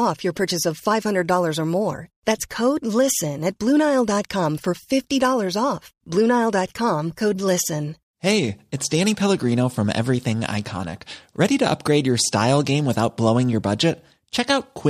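Nothing in this speech recording points to a technical fault at any moment.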